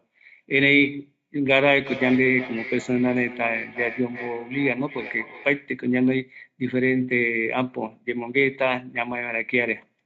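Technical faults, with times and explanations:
1.68 to 5.74 s, feedback echo between two devices: a second copy of the speech trails the original by roughly 0.4 s, peaking about 14 dB below it. Another device in the room is playing the call back into a live microphone, and neither echo canceller removes sound from the other device. On a spectrogram, each syllable's harmonic pattern reappears as a fainter duplicate shifted about 0.4 s later. In the waveform, small bursts follow each main burst.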